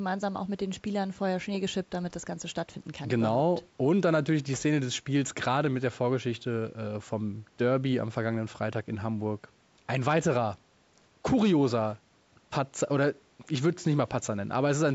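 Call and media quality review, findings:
No faults found in recording.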